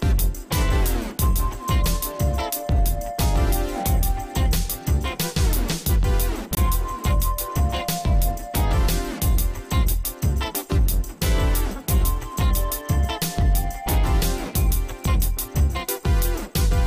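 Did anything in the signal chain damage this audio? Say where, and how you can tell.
Yes. A tick at 4.0 s and a 21 ms hole at 6.55 s are blocks of digital silence, likely buffer underruns leaving output zeroed.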